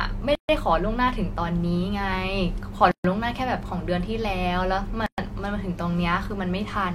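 Speech with three gaps at joins of encoded pieces: silences at 0.35–0.49 s, 2.91–3.04 s and 5.06–5.18 s, about 120–140 ms each. Separately encoded segments were joined without trimming encoder delay and final-frame padding, so brief dropouts with smeared edges interrupt continuous sound.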